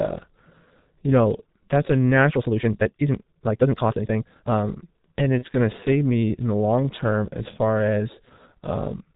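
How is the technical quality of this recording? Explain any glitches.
The recording has poor technical quality, with one problem running through the whole clip and two short events.

Throughout, the speech passes through a G.723.1 codec at about 6.3 kbit/s, an early internet-telephony coder that works in 30 ms frames and models the voice with a slowly updated filter. It discards everything above 4 kHz and approximates the excitation coarsely, so the damage is heavy: the speech sounds muffled and hoarse, and consonants lose their edges and blur together.

From 2.29 to 4.67 s, right after "you know that's a", there is a time-stretched section. The pace abruptly jumps to nearly twice normal speed, about 1.96 times, while the pitch stays where it was. The likely cause is software compressing that stretch to fit a length by cutting out short pieces and joining the rest, which is why the passage sounds rushed rather than chipmunk-like.

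Between 5.38 and 5.46 s, just before "going to", VoIP packet loss concealed by the speech codec causes a brief glitch. The gap fits a single lost 30 ms frame. The decoder filled it by extending its last pitch and filter settings at falling gain, so the sound is stretched over the gap as it fades. Because each frame depends on the previous one, the voice stays weak or distorted for tens of milliseconds after the lost frame.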